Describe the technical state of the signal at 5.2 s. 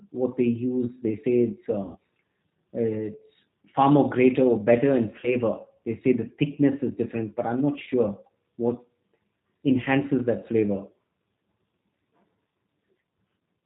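At 5.2 s the signal shows VoIP packet loss concealed by the speech codec. It runs from 5.20 to 5.36 s, right after "greater or better in". About 30 ms of audio is missing, which fits a single lost packet. The decoder fills the hole by repeating its last pitch and vocal tract shape at falling gain. The result is a brief smeared stretch, a fading buzzy tone or coloured noise. The sound stays weak and distorted until about 5.36 s, because each rebuilt frame leans on the damaged one before it.

Beneath this sits the G.729 codec at 8 kbit/s, the G.729A variant. Its damage is plainly audible. Nothing above 4 kHz survives, so the sound is narrow and muffled. Each 10 ms frame is rebuilt from a filter, a pitch predictor and a few pulses. That gives the speech a rough, slightly synthetic texture.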